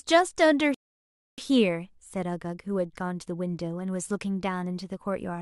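At 0.74 s the player's buffer ran dry, a rebuffering stall: playback halted until more downloaded data arrived. The speech drops into silence until 1.38 s, adding roughly 0.64 s, then resumes exactly where it stopped, with nothing skipped.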